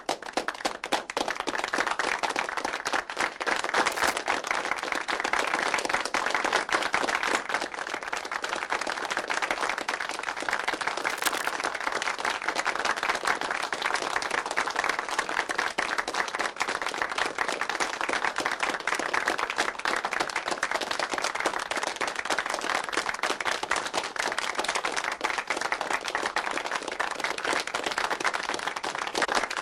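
At 3.92 to 4.14 s and again at 11.02 to 11.49 s there's cable scratch noise: rough, rustling bursts, likely from a worn connector being moved, sitting about 10 dB and then about 5 dB under the sound. Compressed frames skipped at 21.83 s and 29.24 s: the audio jumps ahead roughly 70 ms, then roughly 150 ms, which fits about 3 and then about 7 dropped frames of 23.2 ms each.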